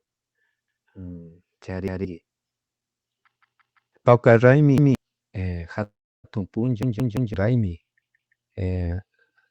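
The speech stutters six times from repeated buffers. At 0.68 s, 1.88 s and 4.78 s, a piece of about 170 ms plays twice. At 3.41 s and 6.83 s the same piece plays four times, filling about half a second. At 8.02 s it plays three times. Each repeat ends with a hard join. The length fits an 8192-sample buffer. New audio did not reach the device in time, so it replayed the last buffer. The sound that should have come next is lost.

A call audio freeze runs from 5.83 s to 6.26 s. The last sound carries on briefly as a fading buzz or hiss. Then about 330 ms of silence follows. The gap lasts about 0.4 s in all. The likely cause is delayed packets draining the jitter buffer. The speech then resumes where it stopped, so nothing is missing. It just arrives later. The Opus call path limits the bandwidth to 8 kHz across the clip.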